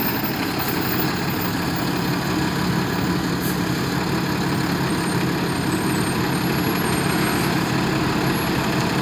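Nothing in these everyday sounds catches the ear as a technical fault at any point, so there's really nothing to flag here.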